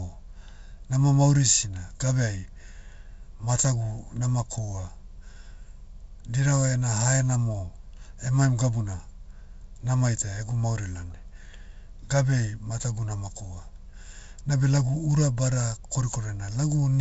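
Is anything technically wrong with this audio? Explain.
No, this speech comes through as ordinary G.722 wideband telephone audio, with the content stopping near 7.7 kHz and only the light upper-band hiss and mild coding roughness expected of this codec, consistent with its 56 kbit/s mode.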